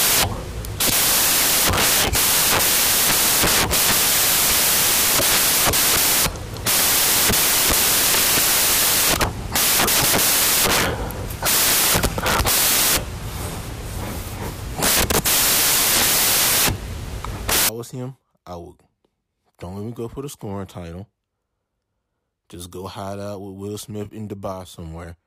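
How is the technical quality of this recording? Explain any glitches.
Poor: the first 17.69 seconds carry a serious decoding fault, samples built from the wrong bytes. The reader assembles each speech sample from its bytes in the wrong order or at a misaligned offset, so the rapidly fluctuating low-order bits end up as the most significant part of every value. From 0.0 s to 17.69 s this turns the speech into loud, harsh broadband noise, and it stops just before "was him I would".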